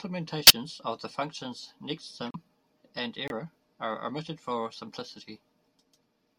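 Bit errors in the compressed stream reached the decoder, which played the damaged frames anyway. This is a corrupt frame decoded fault, and each one throws energy to the wrong frequencies as a short burst. The first hits a couple of frames at 0.47–0.53 s, loud at about -5 dBFS, just before "of the functions". The second spans several frames at 2.27–2.36 s, right after "of the functions", at about -25 dBFS. The third is a single-frame blip at 3.28–3.32 s, also about -25 dBFS, just before "are omitted for".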